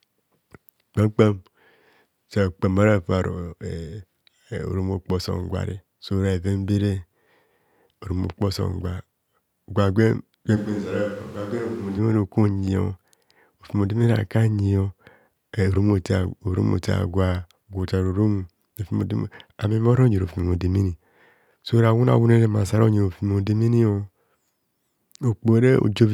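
From 10.58 to 11.97 s the speech abruptly turns roomy and hollow, thinner in the bass, roughly 5 dB quieter, with background noise rising to about 25 dB below the speech, then snaps back. This is likely a switch to a distant microphone.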